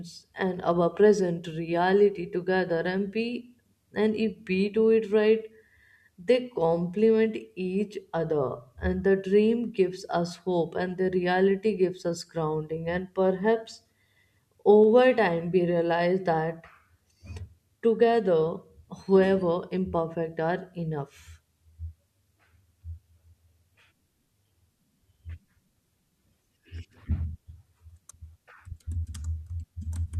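No technical faults can be heard anywhere in this recording of speech.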